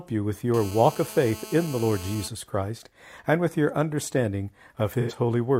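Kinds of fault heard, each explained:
GSM phone buzz: A 2G phone close to the recording chain was transmitting in bursts about 217 times a second, and the audio circuitry rectified those radio pulses into the signal. From 0.54 to 2.28 s this is heard as a hard, raspy buzz at 217 Hz with a dense stack of harmonics. It sits about 16 dB below the speech, bears no relation to it, and stays nearly steady, which fits a phone in an active call.
AAC frame loss with concealment: Part of the AAC stream never reached the decoder. Instead of leaving a gap, the decoder synthesised a stand-in from the last good spectrum it had. At 5.0 s, for about 85 ms until 5.13 s, the speech turns into a brief smeared, noisy, phasey patch. That length points to two lost frames, which is too short for the concealment to fade down to a faint noise floor before normal decoding resumes.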